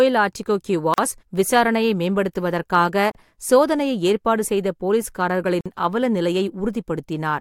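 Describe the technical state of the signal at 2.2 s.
At 2.2 s the speech signal is intact, with no dropout, distortion, glitch or other technical fault.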